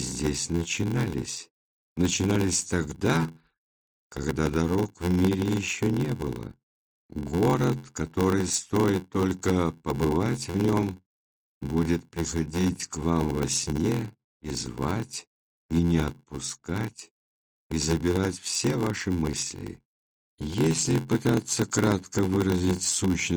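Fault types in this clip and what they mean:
Block size mismatch (padded): each block written into the chain is shorter than the block the next stage reads, so the remainder is zero-filled and a tiny silence lands in every block. Across the whole clip this produces a steady buzz at about 86.1 Hz, which fits a 512-sample read block, and stretches the audio to 0.861 times normal speed. Pitch stays roughly unchanged, which separates it from a sample-rate mismatch, where slowing also lowers pitch.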